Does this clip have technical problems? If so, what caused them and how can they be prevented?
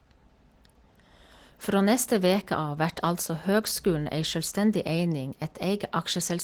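Yes, there's Opus voice compression across the whole speech clip, and it's plainly audible. The hoarse, slightly robotic grain fits roughly 16 kbps in hybrid mode, where SILK's coarse excitation coding carries the lower band and CELT thinly fills everything above 8 kHz up to about 20.3 kHz. To avoid it, encode at a higher bitrate or keep an uncompressed copy.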